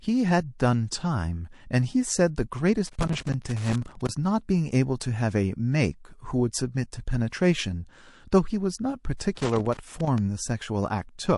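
MP3 compression runs through the whole clip and is plainly audible. The speech has a watery, swirling quality, with faint detail flickering in and out as weak frequency lines are zeroed from one frame to the next. The likely cause is encoding at a low bitrate, which fits roughly 48 kbps, where too few bits remain to keep the quieter components.

Loose connector crackle appears from 2.85 to 4.09 s as an irregular burst of scratching laid over the speech. A worn or dirty contact is repeatedly making and breaking, so the signal is chopped into fragments. The effect is ragged and uneven, with no steady rhythm to it.

Pre-echo comes next, from 7.30 to 7.32 s. A short hiss runs for about 20 ms ahead of a sharp attack, with noise about 13 dB above what should be there. The encoder spread its quantisation noise across a block of roughly 48 ms. Because the attack fell late in that block and the codec never switched to short blocks, the noise sized for the loud onset leaked into the quiet moment before it.

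A second pre-echo at 9.17 to 9.20 s is stronger. The hiss spreads about 32 ms before the attack and rises about 24 dB, so the onset sounds smeared and softened rather than crisp. The cause is the same long 48 ms block with no short-block switching.

Loose connector crackle returns from 9.35 to 10.18 s as another irregular burst of crackle while the faulty contact makes and breaks again.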